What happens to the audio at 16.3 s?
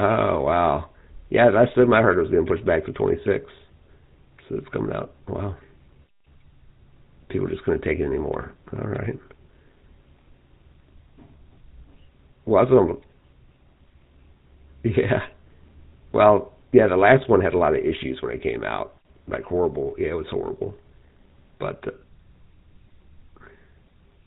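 At 16.3 s the speech is running through the same GSM full-rate codec damage heard from start to finish. The codec models the vocal tract and rebuilds the excitation from sparse regular pulses, which fits the 13 kbps mode. Everything above 4 kHz is gone, leaving a plainly buzzy, gravelly roughness.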